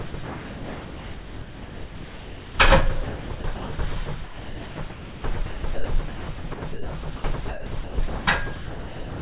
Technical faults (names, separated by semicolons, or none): sound chopped by the voice detector; sound dropped by the voice detector